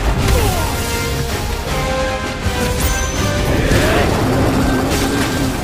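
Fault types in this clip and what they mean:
processor overload crackle: dozens of missed deadlines on tiny buffers leave skipped gaps, giving gritty crackle from 4.88 to 5.31 s, unlike a single clean dropout.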